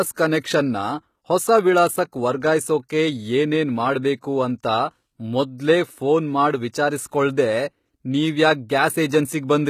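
Right from the start the speech carries the plainly audible sound of HE-AAC compression, likely at a bitrate around 20 kbps. The treble above the crossover is rebuilt from copied lower bands rather than coded, so sibilants come out gritty and lispy, and nothing reaches past about 14.9 kHz.

Then at 6.72 s, just after "ಮೊದ್ಲೇ ಫೋನ್ ಮಾಡ್", there's a brief pre-echo. Quantisation noise sized for a sharp attack spills about 14 ms ahead of it within the codec block, so a short hiss precedes the onset and the attack itself sounds softened.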